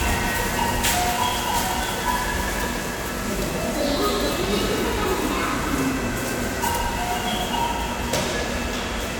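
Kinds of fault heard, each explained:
No technical faults can be heard in this audio.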